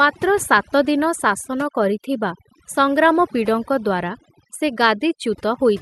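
From start to finish the speech carries overdone noise removal. A suppressor set far too hard has driven individual frequency bands down or out wherever their level sat close to its noise estimate, so the background collapses to near silence dotted with twinkling specks, and the softer parts of the voice are stripped away. A gate would mute whole stretches instead, and coding noise from the call path, whose top end stops near 12 kHz, would not sparkle band by band.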